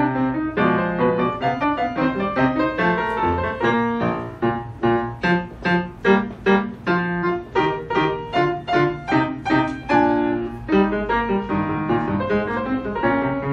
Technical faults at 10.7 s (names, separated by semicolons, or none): none